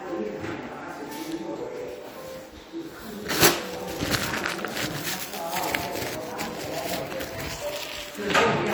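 Nothing in this recording of everyday sounds stood out as a technical problem on listening.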